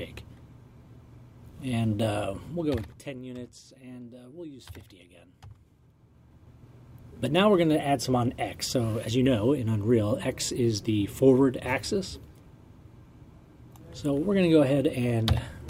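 Zipper noise runs from 2.48 to 3.22 s in this audio. Across that span the level falls by around 20 dB in unsmoothed 2 dB steps, at roughly ten steps a second. Each jump leaves a small click, so the fade carries an audible ticking.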